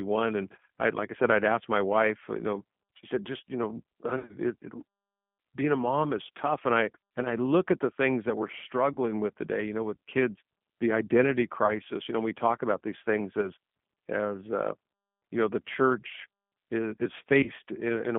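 Throughout, the speech carries plainly audible G.729 codec damage. The 8 kbit/s coder rebuilds each frame from a vocal-tract filter, a pitch predictor and a few pulses, so it sounds rough and synthetic, and the line runs only from about 150 Hz to 3.4 kHz.

VoIP packet loss concealed by the speech codec first appears from 4.17 to 4.35 s. About 100 ms of audio is missing across 120 ms, with the longest gap 60 ms. The decoder stretches its last pitch and filter into a fading buzz or coloured noise, and the speech stays weak or distorted afterwards. Shorter dropouts at 8.93–8.97 s, 11.66–11.73 s, 13.42–13.47 s and 17.43–17.50 s each cause a brief smear.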